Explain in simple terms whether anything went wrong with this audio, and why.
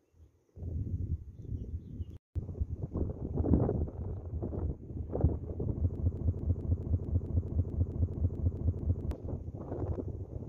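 A broken-record loop runs from 5.96 to 9.11 s: one short piece, about 0.22 s long, repeats exactly 14 times back to back. The player or stream likely stalled and kept replaying its last fragment, so the audio meant for those seconds is lost.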